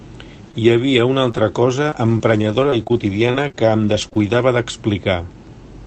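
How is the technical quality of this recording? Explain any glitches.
Scattered short gaps mar the speech between 0.51 and 4.39 s, heard over the call codec's band-limited sound, whose top end stops near 8 kHz, consistent with Opus at around 32 kbps. Across that stretch about fifteen brief dropouts, the longest roughly 30 ms, add up to 240 ms of lost audio. The receiver patched each hole by extending the preceding sound, concealing around 7 percent of the span, so the speech stays clear but carries small ticks, smears and hiccups.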